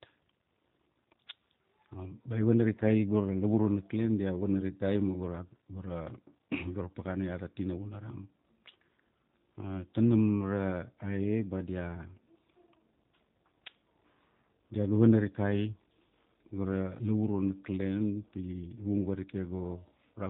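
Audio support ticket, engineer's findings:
G.729 codec damage, whole clip, plainly audible. Speech is band-limited, with nothing above 4 kHz, and sounds rough and a bit synthetic from the pulse-based excitation rebuild. Fits an 8 kbit/s G.729-family VoIP leg.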